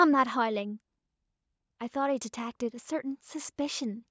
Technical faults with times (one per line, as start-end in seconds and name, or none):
0.05-0.91 automatic gain falling